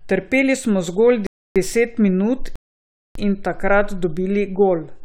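Rebuffering stalls at 1.27 to 1.56 s and 2.56 to 3.15 s interrupt this speech: playback runs dry, falls silent for 0.29 s and 0.6 s, then resumes exactly where it stopped.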